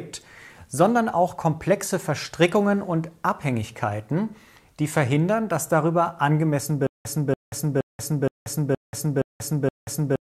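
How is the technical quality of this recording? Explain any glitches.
The recording breaks down near the end. From 6.87 s to the end there is a stutter with silent gaps. A 286 ms burst repeats seven times, each followed by 184 ms of digital silence. A stalled player or stream likely replayed its last fragment at each retry, losing the intervening audio.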